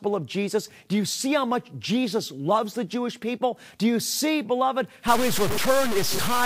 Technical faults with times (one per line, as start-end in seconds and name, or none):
5.08-6.46 low bit depth without dither